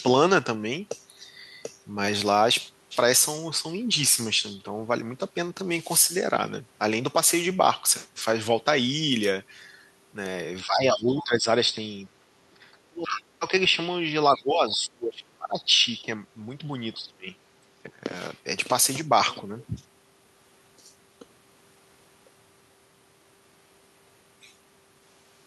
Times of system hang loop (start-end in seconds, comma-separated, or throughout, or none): none